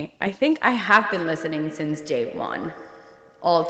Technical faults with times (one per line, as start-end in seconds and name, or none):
0.97-3.69 feedback echo between two devices